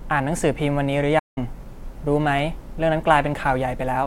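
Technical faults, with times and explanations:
1.18 to 1.38 s, playback stall: the speech cuts out mid-flow for about 175 ms of silence, then resumes where it stopped. The likely cause is the player running short of buffered data or its output thread being blocked, leaving nothing to send until it recovered.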